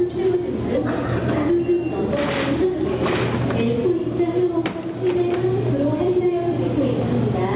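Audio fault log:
throughout: gain pumping. The gain swings by something like 10 dB, so loud and soft sit squashed together. Likely a fast limiter clamping down on mic gain set far too hot.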